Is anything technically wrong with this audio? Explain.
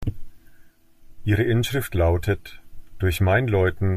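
No, nothing technically wrong can be heard here.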